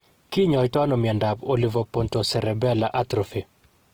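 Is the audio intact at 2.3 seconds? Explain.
No. At 2.3 s, as throughout, the speech sounds grainy and rough, likely from Opus compression filling bit-starved bands with noise, which fits about 16 kbps.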